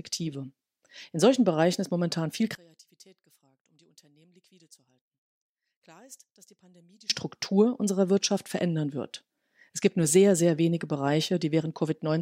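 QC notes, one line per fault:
2.55–7.10 s, one channel inverted: right after "ist momentan viel" the centred speech collapses to a faint residue, about 31 dB down, until 7.10 s. Likely one channel's polarity was flipped, so the shared signal cancels when the channels sum to mono.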